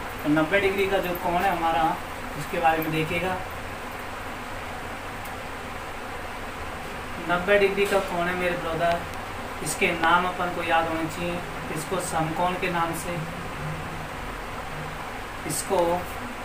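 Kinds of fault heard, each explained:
Loud pop: a sudden voltage step or pulse, likely from a plug, switch, static or driver glitch, lands on top of the sound, which carries on beneath it. Here a double pop spans 8.92 to 9.16 s, with single pops at 10.04 s and 15.79 s, peaking about 20 dB, 20 dB and 15 dB above the sound. On a waveform each shows as a tall narrow spike; on a spectrogram, as a thin vertical stripe across all frequencies.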